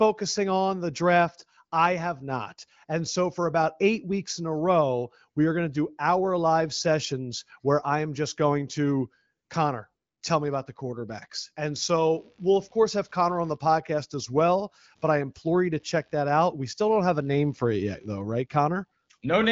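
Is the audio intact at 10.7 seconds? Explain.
Yes, the audio is intact at 10.7 seconds; the speech there passes through the AMR wideband (HD Voice) codec at 15.85 kbit/s, with its band limited to about 7.5 kHz, and nothing goes wrong at that moment.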